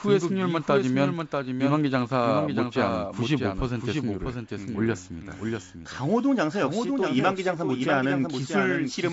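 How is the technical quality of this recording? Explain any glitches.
The recording has one clear fault running through the whole clip: a doubled audio track, with a second copy of the speech trailing the first by roughly 0.7 s at about 5 dB lower level. The audio is carried over G.722 wideband telephone coding, with nothing above 7.7 kHz.

The doubled track is present from start to finish. The late copy is full-band and dry, with no decay or room colour, so it sounds like a distinct second pass rather than an echo. The likely cause is the same signal being captured again through a slower path.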